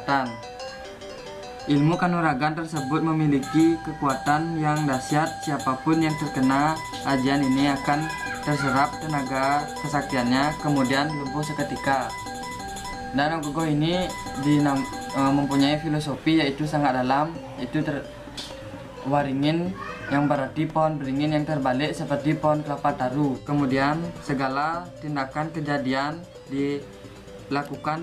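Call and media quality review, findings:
No audible faults found.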